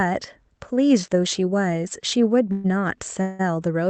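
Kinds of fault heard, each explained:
Call audio freeze, at 2.52 s and 3.21 s: the speech stalls for 0.12 s, then 0.18 s, each gap bridged by a fading buzz or hiss that continues the last sound. Delayed packets likely emptied the jitter buffer. Speech then resumes where it stopped, with nothing lost, only pushed later.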